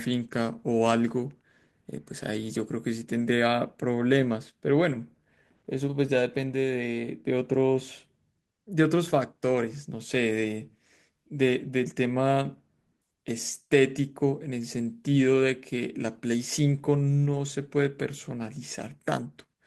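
Nothing to flag: no technical faults are audible anywhere in the speech.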